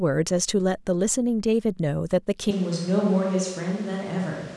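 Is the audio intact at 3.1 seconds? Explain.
No. At 3.1 s the speech is in a switch to a distant microphone, which begins abruptly at 2.51 s and lasts to the end of the clip. The sound turns roomy and hollow, with thinner bass, a level drop of roughly 5 dB, and a room-noise floor only about 25 dB below the speech. This likely happens because the close microphone's feed dropped out and a farther pickup, such as a camera microphone, took over.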